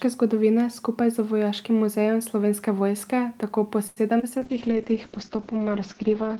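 At 3.87 to 3.99 s a sound is held about 91 ms too long: a short stall from a late packet. The jitter buffer ran empty, the receiver stretched the last sound, then resumed where it stopped.

Two brief smears follow at 4.19 to 4.21 s and 4.21 to 4.24 s. This is short concealed packet loss: 40 ms, then 20 ms, never arrived, and each gap was bridged by about 9 ms of continued sound before the real audio resumed. The delay also shortened by roughly 30 ms.

From 4.39 to 4.79 s the speech drags at 91% speed with unchanged pitch. This jitter buffer slow-down repeated small pitch periods to add 42 ms of reserve.

From 4.41 s to the end the speech turns muffled and rough. A call bitrate drop from 64 to 8 kbps narrowed the bandwidth from 20 kHz to 8 kHz and coarsened the coding.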